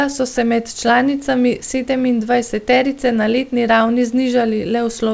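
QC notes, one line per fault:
No faults heard anywhere in this speech recording.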